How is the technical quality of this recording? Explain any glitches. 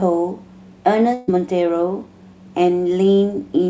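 The speech has one glitch, carried over a call path whose G.722 coding leaves nothing above 8 kHz. Burst of packet loss, 1.14 to 1.30 s: about 140 ms never arrived, so the receiver extended and faded the last sound before speech jumps ahead.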